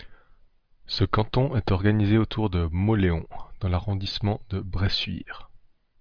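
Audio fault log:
No technical faults can be heard anywhere in the speech, and the signal stays steady and intact across the whole recording.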